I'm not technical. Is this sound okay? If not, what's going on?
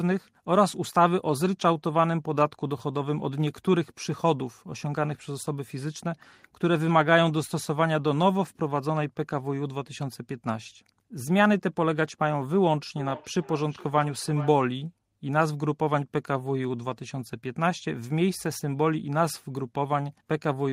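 No. From 12.97 to 14.66 s the speech repeats itself roughly every 0.4 seconds, each copy quieter and thinner. This is feedback echo between two devices: one device plays the call aloud, and the other device's microphone picks that sound up and sends it back.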